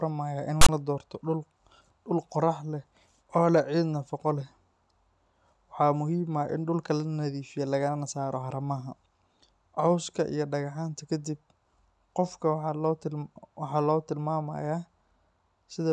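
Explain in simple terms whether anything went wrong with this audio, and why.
Just before "la doorto", from 0.61 to 0.69 s, a harsh burst of static cuts in. This is file tags played as audio. Stored text, then blank padding, was read as sound.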